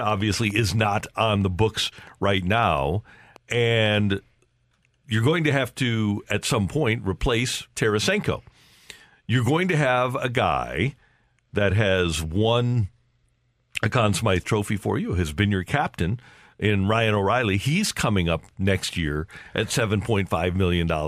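A speech recording whose first four seconds carry a train of clicks: uneven popping at roughly 4.7 per second from 0.10 to 3.95 s, about twenty in all, peaking near the speech level. Electrical interference or a faulty connection or power supply is the likely cause.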